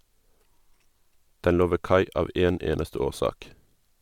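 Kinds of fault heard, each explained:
No technical faults detected anywhere in the speech.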